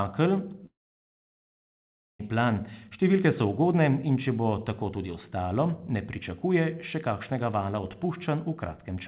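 A long network dropout runs from 0.66 to 2.21 s in this speech clip, most likely caused by packets failing to arrive over the call link. The receiver stretches the last sound into a brief fading buzz, then nearly 1.5 s of silence follows before the audio resumes at "plan številke so ugodne". About 1.54 s of the original is simply gone. Throughout, the G.711 mu-law call path leaves nothing above 4 kHz.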